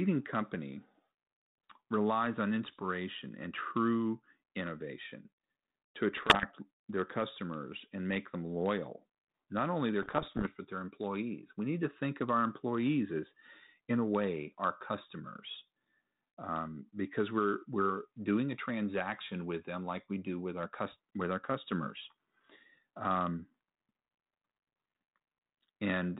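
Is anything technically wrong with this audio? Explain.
Yes. Bit errors on an ADPCM link occur three times, from 2.66 to 2.83 s, 6.17 to 6.45 s, and 10.02 to 10.47 s, on speech carried over 32 kbit/s G.726 with its band topped at 4 kHz. Flipped bits corrupt the coded differences, and because the decoder adapts its step size and prediction from those values, each error keeps disturbing the output for a few milliseconds. The result is pops and rough, gritty bursts with brief jumps in level. The last burst is the longest and densest, with an error rate near one percent.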